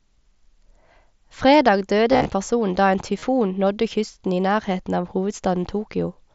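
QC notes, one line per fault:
2.12–2.26 s, concealed Bluetooth headset packet loss: about 98 ms of packets drop out across 135 ms just before "person da en". The receiver repeats the best-matching recent waveform, so runs up to 37.5 ms turn buzzy and warble as real audio returns.
3.19–3.22 s, concealed Bluetooth headset packet loss: a 30 ms gap just after "person da en" is filled with repeated waveform, giving a brief buzzy patch.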